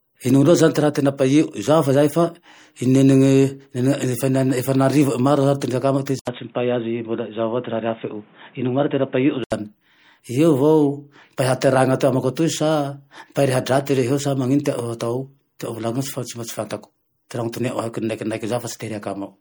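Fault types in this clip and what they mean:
MP3 compression: Throughout, a watery, swirling texture of weak frequency components flickering on and off between frames, which fits a bitrate around 64 kbps and is plainly audible. This is likely MP3 coding. Unlike a device change, it never comes or goes.
Pre-echo: A brief hiss just before sharp onsets at 6.06 s, spread over 14 ms, and at 17.52 s, over 11 ms. Coding noise is smeared ahead of the attack within its block. Unlike a click, it is diffuse noise that leads an onset.
Input switched to a poorer device: From 6.19 to 9.52 s, likely a change to another input. It opens with an 80 ms silence, nothing passes above 3.8 kHz, and new background noise sits roughly 35 dB below the signal, with level roughly unchanged. Unlike codec damage, it starts and stops.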